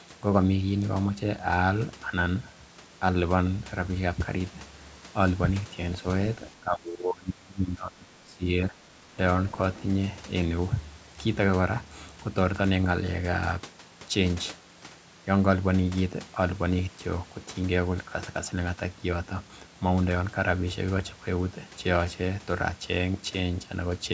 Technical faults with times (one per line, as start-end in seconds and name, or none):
6.60-9.12 speech suppressed in double talk
9.49-9.82 other side's voice leaking through